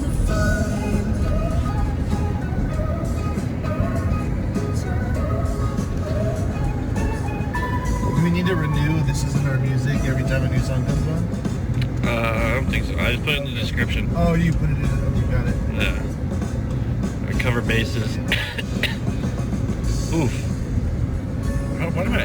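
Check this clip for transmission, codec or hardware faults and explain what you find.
One fault is present: sample clock jitter, running throughout the clip. The converter's clock wanders by several microseconds, so samples land early or late and steep waveform slopes pick up the largest errors. It comes across as hiss or roughness around 30 dB below the signal, rising on loud, bright passages and disappearing in silence.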